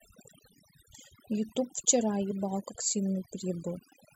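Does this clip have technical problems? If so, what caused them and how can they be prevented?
Yes. Throughout this speech clip the background sinks to near silence dotted with twinkling specks. That is overdone noise removal: a noise reduction stage set far too aggressively keeps switching individual frequency bands down or off whenever they come close to its noise estimate, and the quieter parts of the voice are stripped along with the hiss. Preventing it means using a gentler reduction amount and checking the result against the original by ear.

From 2.30 to 2.32 s the sound briefly lurches forward. These are compressed frames skipped: about one frame, around 20 ms of audio, was never played, most likely because it was missing or the decoder rejected it as corrupt. Protecting the file or stream against loss and corruption, with verified transfers or error correction, prevents it.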